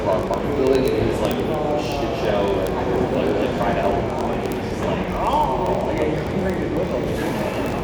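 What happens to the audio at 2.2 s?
At 2.2 s the sound carries a fast, steady train of sharp ticks, about fifty a second and of uneven strength. These are word clock ticks, present from 0.11 s to 7.83 s. The receiving device runs on its own clock, roughly 0.1 percent off the sender's. Each time the two clocks slip past each other, a sample is dropped or repeated, leaving a tick every 20 ms or so.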